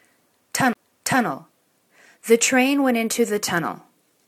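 A CD skip occurs from 0.73 to 0.75 s. The laser lost its track and landed on a different turn of the disc's spiral. Playback mutes for about 20 ms, a short gap. The sound then resumes from another point, with an abrupt discontinuity.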